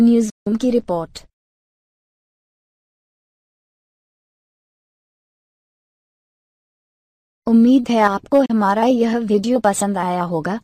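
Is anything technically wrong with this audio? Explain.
Yes, there are two digital broadcast dropouts. From 0.30 to 0.47 s, and again from 8.46 to 8.50 s, the receiver stopped getting valid frames and muted until clean ones returned. The sound fades out within about 8 ms and comes back later in the programme, with about 160 ms and 32 ms of programme lost. The first gap fits five lost frames of 32 ms each. On a waveform, each dropout is a flat silent gap with a short ramp at its start. On a spectrogram, it is a blank vertical strip across all frequencies.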